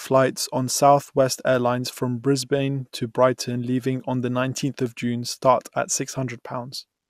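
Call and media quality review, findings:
DAB burbling, 6.13–6.30 s, right after "start at". Burbling over the speech for about 0.17 s, a span consistent with roughly nine audio frames. Probable component: DAB receiver or MP2 decoder. Weak reception lets residual bit errors, at a fraction of a percent, slip past error correction. Corrupted samples add short noise blips in single sub-bands; corrupted scale factors make sub-bands jump in level for up to a frame.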